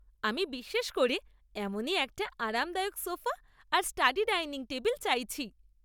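Nothing stood out on listening to this speech recording.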